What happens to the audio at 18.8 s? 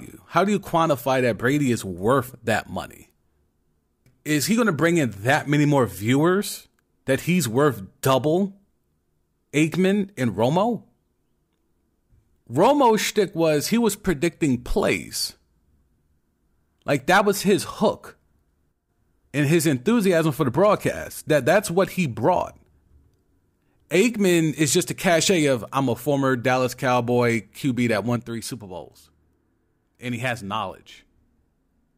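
Right after "that was his hook", from 18.72 to 18.89 s, the level dips abruptly by about 6 dB, then recovers before "and his enthusiasm for". The likely cause is one channel dropping out. With one stereo side gone, the mono sum carries only half the shared signal.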